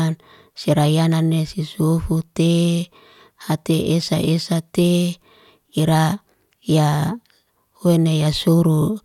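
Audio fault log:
1.12–1.14 s, loud pop: a single sharp pop a few decibels louder than the speech, which continues underneath. It is likely a brief voltage pulse from a plug, switch or static discharge. On the waveform it appears as a narrow spike, and on the spectrogram as a thin vertical broadband stripe.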